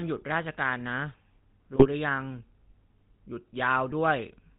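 Across the whole clip the speech carries the buzzy, gravelly roughness of the GSM full-rate codec, which fits a 13 kbps GSM full rate stream. The vocal tract is modelled and excited by sparse, regularly spaced pulses, and nothing above 4 kHz survives, so the sound is band-limited and plainly coarse.

GSM bit errors break in twice. From 1.74 to 1.86 s, corrupted filter, pitch or gain values reach the decoder over several consecutive frames, bending the spectrum into a squawking, gargled burst. A shorter hit at 3.89 to 3.93 s gives a brief pop-like disturbance.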